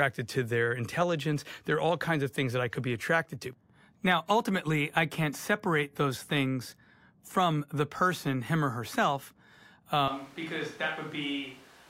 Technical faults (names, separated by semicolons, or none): switch to a distant microphone